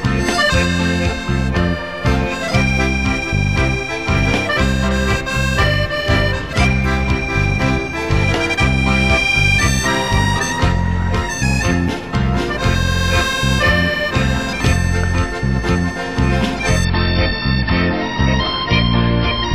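The audio holds its higher quality until 16.85 s, when it abruptly switches, with no gap, to an adaptive stream at a lower bitrate for the rest of the clip. From there to 19.54 s nothing is left above about 5.8 kHz, so the treble goes dull and smeared codec artefacts rise. The change points to the stream dropping from roughly 128 kbit/s MP3 to a 24 kbit/s version after the connection slowed. A spectrogram shows a flat ceiling at 5.8 kHz starting exactly at 16.85 s, while the waveform stays continuous.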